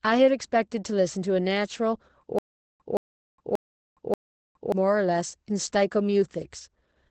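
From start to finish the speech carries Opus voice compression: nothing sounds above about 8.7 kHz, which fits the SILK coder's wideband mode, and the voice is plainly muffled, hoarse and faintly robotic, consistent with a low bitrate near 12 kbps. What separates this from a simple low-pass filter is the coarse, grainy texture inside the band, where the linear-prediction coder has economised on the excitation rather than merely cutting treble.

Between 2.39 s and 4.72 s there is a stutter with silent gaps. A 171 ms fragment plays, then about 413 ms of digital silence follows, and the same fragment returns on a steady 584 ms cycle, repeating four times. The likely cause is a stalled stream whose player replayed its last buffered fragment at each retry and then ran dry, so the speech that belonged in that span never arrives. Unlike packet-loss concealment, which fades or smears the sound, this repeats an identical burst at a regular pace with true silence between.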